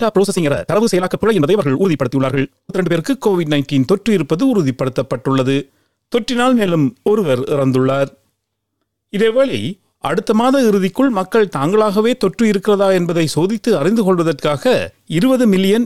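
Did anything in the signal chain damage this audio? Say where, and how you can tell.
Yes. From the very start to about 3.0 s the pace runs roughly 1.69 times fast and rushed, while pitch stays put. That's a time-stretched section, likely from software processing before playback squeezing the audio to fit a length by dropping short slices.

At 2.69 s, inside that rushed stretch, the sound jumps ahead with a small blip. That points to a stream segment skipped at the network stage. One chunk likely failed to load, and the player simply carried on with the next, leaving a gap in the programme.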